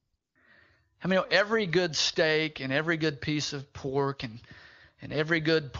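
AMR comfort noise fills 0 to 0.13 s and 0.15 to 0.35 s. Speech frames stopped, so the receiver synthesised steady, smooth noise, which appears as flat, featureless spectrogram bands with abrupt edges.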